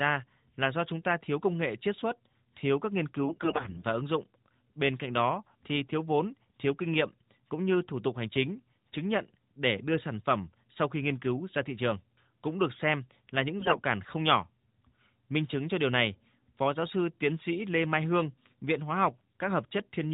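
Speech carried over an AMR-NB mobile channel at 12.2 kbps, so nothing above 4 kHz comes through. Two short stretches turn hoarse, scratchy and gargly while keeping roughly their pitch and level. The first runs from 3.24 to 3.85 s, between "xuất thiếu các nghiên" and "và ứng dụng bên". The second runs from 13.60 to 13.84 s, after "được xem là những" and before "không nhỏ". These are AMR bit errors. On a weak link, roughly a fifth of the less protected bits in the affected frames flipped, so the excitation pulses landed in wrong positions and the fine pitch, gain and spectral values were skewed.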